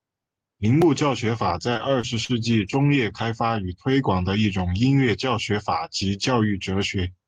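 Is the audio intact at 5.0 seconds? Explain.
Yes, the speech at 5.0 seconds plays through cleanly, with no dropout, click, distortion or other fault at that point.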